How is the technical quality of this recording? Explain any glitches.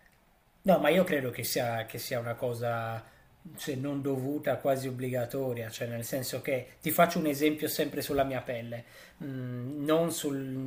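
Listening closely to the recording, nothing stood out as a technical problem anywhere in it.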